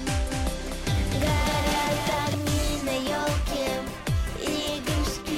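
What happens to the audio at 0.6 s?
At 0.6 s the sound is heard twice: a second full-band copy, a few dB quieter, trails about a third of a second behind with no decay or room colour, from 0.31 to 2.35 s. This doubled audio track is likely from a slower second capture path.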